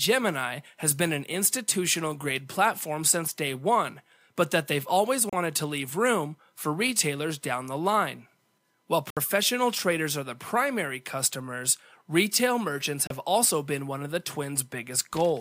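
Digital broadcast dropout hits this speech three times. The receiver loses good frames and mutes. It cuts out at 5.30 to 5.33 s after "but that they've always", 9.10 to 9.17 s before "traders are the primary", and 13.07 to 13.11 s after "primary customers retail merchants". The gaps are about 32, 64 and 32 ms, which fits one or two lost 32 ms frames.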